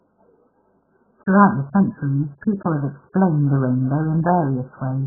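Throughout the speech nothing sounds above 1.7 kHz, leaving it dull and warbly, likely from heavy AAC compression; a spectrogram shows blank space above that.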